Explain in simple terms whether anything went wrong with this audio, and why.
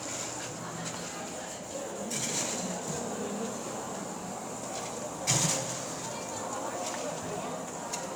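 Nothing stood out as wrong on listening; the sound comes across steadily, with no moment where anything seems to go astray.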